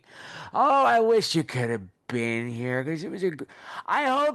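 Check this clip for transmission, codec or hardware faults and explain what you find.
No transmission, codec or hardware faults turn up in this speech clip.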